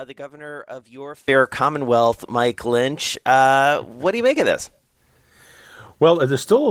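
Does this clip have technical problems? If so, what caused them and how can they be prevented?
Yes. From 0 to 1.28 s the speech drops by about 18 dB and sounds faint, the likely result of one channel inverted: with one stereo side in reversed polarity, the shared centre content cancels when summed to mono. Checking polarity and mono compatibility on both channels before mixdown prevents it.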